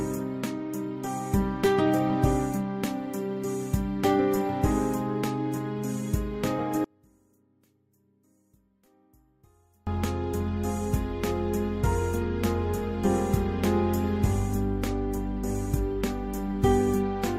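From 6.85 to 9.87 s the sound collapses to a faint remnant, about 37 dB down, likely from one channel inverted cancelling the shared signal in mono.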